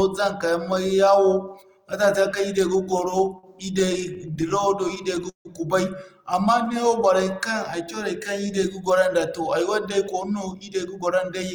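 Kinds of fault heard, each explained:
Repeated stalls (stutter): Packets reached the receiver late or too slowly, so its jitter buffer kept running dry. From 2.77 to 5.48 s the speech halts 27 times. Each gap is bridged by stretching the last sound, and the longest hold lasts 157 ms, with a fade. The fills add up to 451 ms, about 17 percent of that stretch. Nothing is lost. The speech simply drags and stumbles forward.
Jitter buffer slow-down: The receiver needed more audio in reserve, so it repeated single pitch cycles and bits of pauses many times over. Between 6.81 and 8.52 s this adds 119 ms. The speech plays at about 93 percent speed while its pitch stays put. Sounds are drawn out, and a faint warble can creep in.
Jitter buffer speed-up: Here the buffer held more audio than it wanted, so the receiver trimmed out short slices of one or a few pitch cycles, again and again. From 10.22 to 11.52 s roughly 150 ms is removed. 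The speech runs at about 109 percent speed with unchanged pitch. It sounds hurried and slightly clipped in its pacing.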